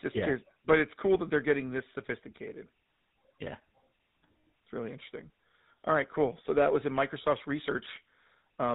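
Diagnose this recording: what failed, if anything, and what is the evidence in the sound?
Codec stage: the GSM full-rate codec is audible throughout, with buzzy, gravelly roughness and nothing above 4 kHz, consistent with coarse pulse-excited vocal-tract modelling at about 13 kbps.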